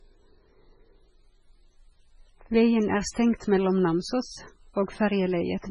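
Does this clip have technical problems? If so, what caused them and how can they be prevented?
Yes. Throughout the speech, the sound has a watery, swirling quality, and s sounds turn metallic and chirpy. Nothing is heard above about 10.4 kHz. The likely cause is heavy MP3 compression, at a bitrate that sounds as low as 16 kbps. Short of bits, the encoder cut the treble at a fixed point. It also dropped weak frequency lines, which flicker on and off between frames. To prevent it, encode at a much higher bitrate or keep the original.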